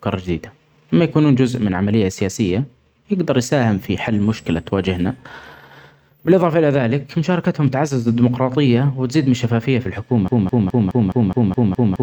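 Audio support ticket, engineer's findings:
Stuttering repeat of one 0.21 s speech fragment from 10.28 s to end, eight times back to back. Broken-record loop, likely a stalled player or stream resending its last buffer; underlying audio lost.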